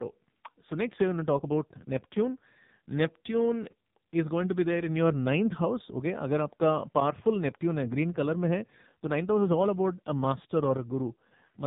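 Speech runs the whole clip with a thin, boxed-in, telephone quality: everything above about 3.8 kHz is gone, and the voice sounds buzzy and synthetic. That is the AMR narrowband mobile codec, heavily compressed, which fits a low AMR-NB mode around 5.9 kbps. It resamples to 8 kHz and rebuilds speech from a vocal-tract model driven by sparse pulses in 20 ms frames, so so few bits leave little detail.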